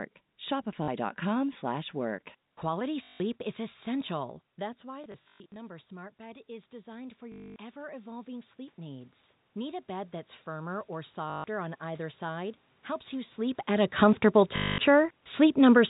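A brief stutter at 0.84 s, about 40 ms long, is the first packet loss with the last packet repeated. A longer robotic buzz follows from 3.04 to 3.2 s. The receiver lost packets and replayed the last one until new audio arrived. The loops don't line up with the pitch, and a run of them buzzes at about 50 Hz, which fits 20 ms packets.

From 4.15 s the level drops by about 16 dB as the talker moves away, around 4.5 s. The automatic gain rising then lifts everything back up by about 13 dB, slowly, until 12.57 s, just before "helps you sleep at". Voice and room noise swell together because the gain control raises the whole input, not just the speech.

During that rise the stutter returns in scattered bursts from 5.04 to 5.56 s, with the longest run about 120 ms. It buzzes again from 7.32 to 7.56 s and from 11.3 to 11.44 s. The last burst, 14.56 to 14.78 s, comes right after "sleep at a comfortable".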